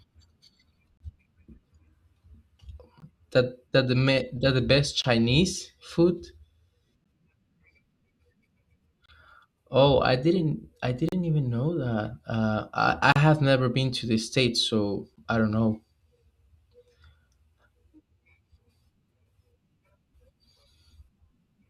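Hard-edged holes of silence cut into the speech at 0.97–1.00, 3.00, 5.02–5.04, 7.04, 9.06–9.09, 11.09–11.12, 13.12–13.16 and 15.16 s. Each is a gap between stream segments. The 2 s segments' time stamps leave a 10 to 38 ms hole. The player fills it with silence. No audio is lost.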